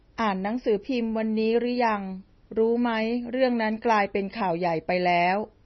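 MP3 compression damage runs through the whole speech clip. Nothing is present above about 5.9 kHz, so the treble is cut at one fixed point, and the sound is heavily watery and swirly, with metallic chirping on s sounds and smeared attacks. The likely cause is an MP3 encoder starved of bits, fitting a rate near 24 kbps. It dropped the top band and zeroed weak frequency lines, which flicker on and off between frames.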